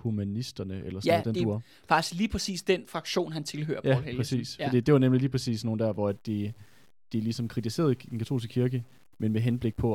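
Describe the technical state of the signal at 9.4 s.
At 9.4 s the speech is grainy, with a rough distortion that tracks the level and gets worse on quiet tails. This is low bit depth without dither, running from 6.09 s to the end, likely from truncation to around 9 bits, leaving error roughly 40 dB down.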